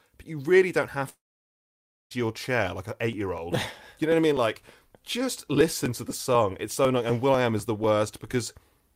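A speech recording where, from 1.09 to 2.12 s, the sound trails off into a fading buzz and then nearly a second of silence, likely a long network dropout. From 3.13 to 8.83 s, regular ticks recur every 0.248 s, about twenty tiny skips of roughly 2 ms each, which is typical of periodic USB or driver dropouts.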